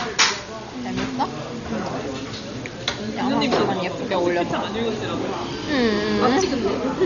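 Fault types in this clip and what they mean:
Low bit depth without dither: The signal was likely rounded to very few levels with no dither, which fits about 6-bit audio. The error tracks the sound, leaving a grainy, gritty distortion only about 20 dB below it that shifts with every change in level.
Dolby Digital compression: Heavy AC-3 style coding at a rate that points to around 40 kbps likely starved many frequency lines of bits. Nothing remains above 6.9 kHz, so the sound is dull, and rough, fluttering noise fills in around tonal parts.
Loud pop: A sudden voltage spike, likely from a switch, plug or driver glitch, was added to the signal at 4.51 s. It is heard as a single sharp pop lasting about 23 ms, peaking a few dB above the surrounding sound, which carries on underneath.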